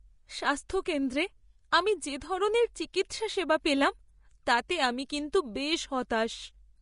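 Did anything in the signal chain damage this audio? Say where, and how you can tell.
Yes, at the codec stage. The speech sounds hissy and grainy throughout, with roughened tones and nothing above 10.5 kHz. That points to Vorbis compression at a low bitrate, likely around 35 kbps, where the treble is quantised so coarsely that its detail turns into noise.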